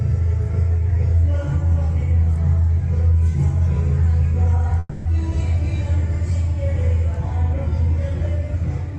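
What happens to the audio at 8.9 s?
Nothing goes wrong at 8.9 s: the audio carries through intact, with only the ordinary character of the call codec it passes through.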